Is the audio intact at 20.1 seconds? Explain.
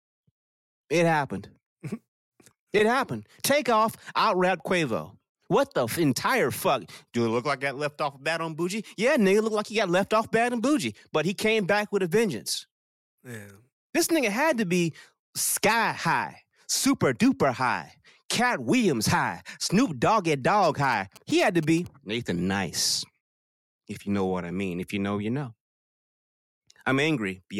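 Yes, the audio is intact at 20.1 seconds, with no fault audible at that moment.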